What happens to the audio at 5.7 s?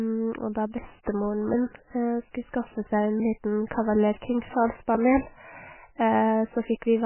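At 5.7 s, as everywhere else in the clip, you're hearing heavy damage that's likely from MP3 compression at a very low bitrate, around 10 kbps. Starved of bits, the encoder drops weak frequency lines frame by frame, so it sounds watery and swirly, with nothing above 3 kHz.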